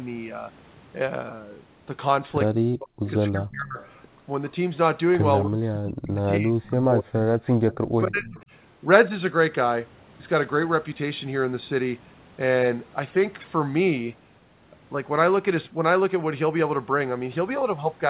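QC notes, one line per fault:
2.52–3.06 s, 3.30–3.79 s, 5.42–8.39 s: speech suppressed in double talk. Level dips by up to about 40 dB, likely an echo canceller ducking overlapping talk. It shows as waveform gaps and faded, broken spectrogram bands.
3.80–4.07 s, 6.64–6.69 s: echo leak. A faint copy trails about 0.28 s behind, about 30 dB down, likely residual loudspeaker echo. It shows as weak delayed spectrogram ghosts below the 4 kHz call-band ceiling.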